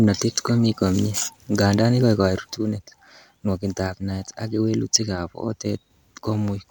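Right after "ngandan ikoekei" at about 2.58 s, the speech suddenly drops by about 6 dB and stays down to the end. That's most likely one channel dropping out: with one side gone, the mono sum loses half of what both channels shared.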